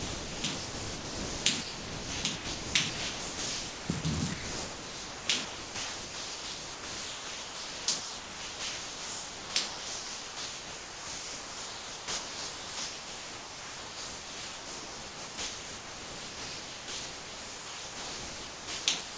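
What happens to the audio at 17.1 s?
At 17.1 s the sound is chopped, likely by the sender's voice detector. From 4.34 s to the end at 19.17 s, about 14.3 s of sound was swapped for comfort noise. The sound has two or more holes where quiet parts were replaced.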